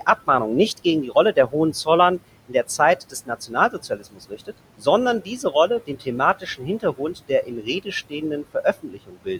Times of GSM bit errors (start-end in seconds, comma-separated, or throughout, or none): none